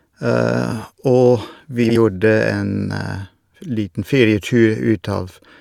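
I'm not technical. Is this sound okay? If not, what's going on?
No. From about 1.84 to 1.97 seconds there is a fault called frames out of order. Two short neighbouring pieces of the speech, each roughly 60 ms long, were played back in swapped order, which fits blocks of about three frames each. For that moment you hear a brief garbled flutter. Nothing is missing: the same sound is there, just rearranged.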